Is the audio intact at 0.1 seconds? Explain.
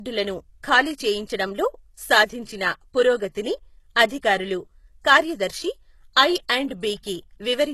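No. At 0.1 seconds, as throughout the clip, this is low-bitrate audio saved at a high bitrate. The speech was likely first squeezed through a very low-bitrate codec, consistent with HE-AAC at around 16 kbit/s, then re-encoded as a much larger MP3. The second encode cannot restore the discarded detail, so the first codec's smeared, watery texture remains, and nothing is present above 12.3 kHz, leaving the speech dull and lacking air.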